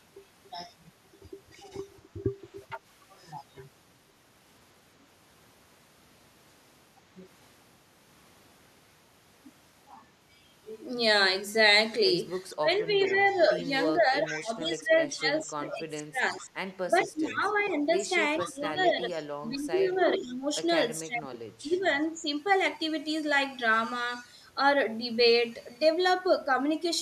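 A far-end echo canceller likely leaves residue, so an echo leak returns the speech 458 ms late and about 15 dB down at 2.26–2.8 s, 12.54–14.41 s and 15.7–20.35 s, then fainter, about 25 dB down, at 21.71–21.87 s. From 12.55 to 22.26 s, the canceller likely mistakes both sides talking at once for echo. This speech suppressed in double talk makes the voice dip in pieces by up to about 15 dB, for around five seconds in all.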